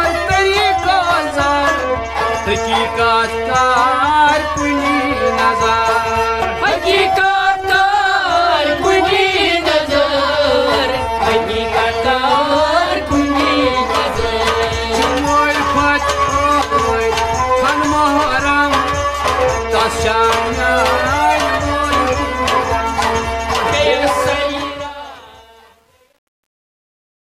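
From 24.27 s to 27.33 s, the fade-out suffers truncation distortion, which fits a 9-bit stage without dither. After 24.99 s, the tail turns gritty.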